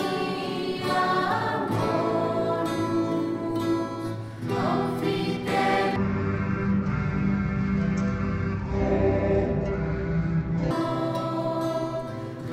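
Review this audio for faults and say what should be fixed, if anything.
From 5.96 s to 10.71 s the audio drops to half speed and exactly an octave low, the signature of stereo read as mono: interleaved left and right samples are taken one after another as a single channel, so each stereo frame becomes two mono samples and the playback stretches to twice its length. What separates it from a plain sample-rate mismatch, which would also slow and lower the sound, is the fainter mirrored copy sitting in the upper half of the spectrum, produced by alternating between the two channels. Reading the channel count from the file header and de-interleaving before playback prevents this.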